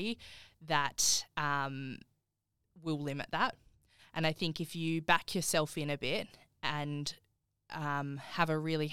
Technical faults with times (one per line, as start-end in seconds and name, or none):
none